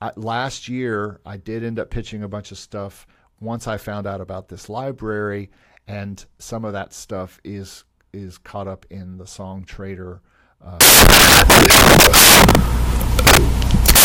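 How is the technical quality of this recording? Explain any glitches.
The recording has one serious fault, at the very end. From 10.81 s, right after "in the song trader", until the clip ends at 14.05 s, the samples are built from the wrong bytes. Each value is assembled with its bytes shifted, swapped or misaligned, so the rapidly changing low bits become the dominant part of the signal. The result is heard as broadband noise. On a spectrogram, energy spreads across the whole frequency range. On the waveform, the section turns into a dense, noise-like block.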